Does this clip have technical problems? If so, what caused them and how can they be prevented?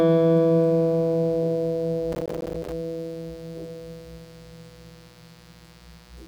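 Yes. There is a mains buzz throughout the music. Sharp switching spikes from a dimmer, rectifier or unshielded cable get into the signal path twice in every 60 Hz cycle. That puts a whole ladder of harmonics of 60 Hz reaching up into the kilohertz range, heard as a steady, raspy buzz sitting roughly 30 dB below the music. To prevent it, keep audio cables away from dimmers and power supplies and use properly shielded, grounded connections.

From 2.12 to 2.72 s there is processor overload crackle. The processor could not finish its small audio buffers on time, and it missed many deadlines in a row. Each miss dropped in a short stretch of silence with hard edges, and the spacing fits buffers of around 5 ms. Strung together, those dropouts make a gritty, tearing crackle over the music that stops once the load eases. To prevent it, reduce the processing load or raise the buffer size so each deadline has more headroom.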